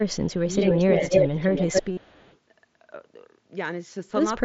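From 0.12 to 0.33 s a very faint echo leak trails the speech by 330 ms, likely from a far-end loudspeaker whose echo canceller let some pickup through. Unlike reverberation, it is a distinct delayed copy rather than a smooth decay.

Between 0.42 and 0.48 s the speech dips sharply, deeply at its lowest point, which is likely speech suppressed in double talk: the canceller mistook overlapping talk for echo and turned it down. A dropout would fall to silence. This is a level duck that recovers.

From 0.61 to 2.37 s the echo leak returns at a 294 ms delay, now roughly as loud as the speech itself, likely because the canceller let much more of the pickup through. It sounds like a second overlapping talker, not a faint ghost.

At 0.76 to 0.94 s a shallower dip of around 10 dB, likely another suppression during double talk, briefly thins the speech.

From 1.92 to 1.97 s, concealed Bluetooth headset packet loss fills a 52.5 ms gap, which fits about seven lost headset frames. 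It sounds like a short buzzy repeat held at full level, ending in a slight warble, rather than a silent gap or a click. Around it, the mSBC headset link passes wideband speech with only light graininess.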